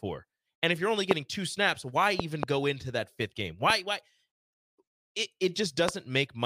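Loud pops, likely voltage glitches, strike at 1.11–1.13 s after "if you're only", a double pop at 2.20–2.45 s, then 3.70–3.72 s and 5.89–5.91 s, each a sharp spike far above the speech, a vertical broadband stripe on a spectrogram.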